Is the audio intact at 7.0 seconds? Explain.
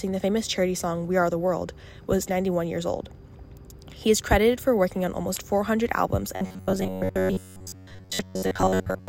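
No. Robotic sound from repeated short buffers runs from 6.36 to 9.08 s. Fresh audio likely arrives too seldom, so a roughly 10.7 ms chunk is looped, replacing most of the real signal and stamping a rigid, metallic 93.8 Hz buzz onto the sound.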